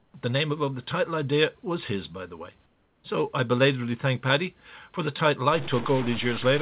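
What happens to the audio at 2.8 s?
From 2.66 to 3.04 s, the room background gives way to a flat, featureless hiss about 4 dB quieter, lasting 380 ms. This is likely comfort noise in place of the background: the sender stopped transmitting during the pause, and the receiver synthesized roughly matching noise until sound resumed.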